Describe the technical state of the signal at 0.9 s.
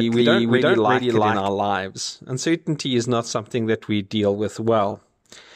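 At 0.9 s the speech carries a doubled audio track. It is already present when the clip begins and runs until 1.48 s, where the second copy cuts off abruptly. A full-band duplicate trails the original by roughly 400 ms, at about the same level. The copy is dry, with no decay or room colour, so it sounds like a second overlapping stream rather than an echo. The likely cause is a second capture through a slower path.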